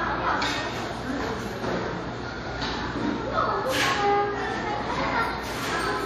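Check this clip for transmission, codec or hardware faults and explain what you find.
There's one fault across the whole clip: WMA compression, likely from an older WMA encoder. It rings and washes, with hiss breathing along with the sound and nothing above 18.4 kHz. Long transform blocks smear quantisation noise over time, and the damage fits a low bitrate around 48 kbps, where weak detail gets zeroed.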